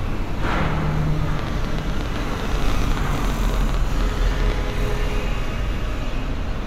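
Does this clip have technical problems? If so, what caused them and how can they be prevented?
Yes. Between 1.39 and 4.71 s there is a train of clicks, most likely from interference picked up from nearby equipment or a faulty connection or power supply, injecting short pulses into the signal. It comes through as a ticking of roughly fifty near-identical pops at an uneven pace averaging about 13.9 per second, peaking around 10 dB above the sound itself. To prevent it, keep cables and the interface away from noisy electronics and make sure connections and the power supply are sound.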